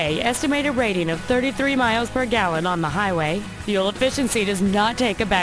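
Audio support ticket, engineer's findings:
Aliasing throughout: gritty, metallic top end. Downsampling without an anti-alias filter; content above 11 kHz folds back, points to a 22 kHz rate. Spectrogram: mirrored energy, about 20 dB down, running hard to 11 kHz.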